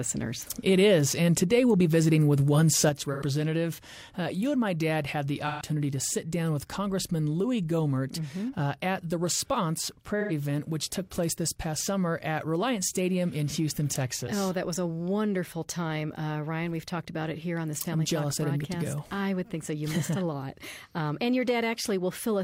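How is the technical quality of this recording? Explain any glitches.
The recording has clear technical faults: a lasting level drop and three short concealed dropouts.

One channel drops out: from 2.89 s to the end, the level falls abruptly by about 6 dB, likely because one stereo channel was lost before the mono sum.

AAC frame loss with concealment: the decoder patched over missing data at 3.12 s (85 ms), 5.47 s (128 ms) and 10.2 s (85 ms), giving brief smeared, noisy patches, consistent with two or three lost frames each.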